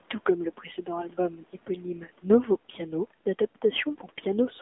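Throughout, the AMR narrowband mobile codec limits the speech to about 200 Hz to 3.5 kHz. The buzzy, synthetic timbre fits a low bitrate near 7.4 kbps.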